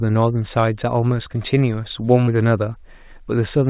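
A speech clip carried over a call path whose band stops at 4 kHz, consistent with G.711 A-law at 64 kbps, has one short concealed packet loss between 2.24 and 2.29 s. About 40 ms of audio failed to reach the decoder in time, and the receiver synthesised roughly 32 ms by extending the preceding sound before crossfading back into the real signal. The result is a brief smeared, wobbling patch where the original detail is missing.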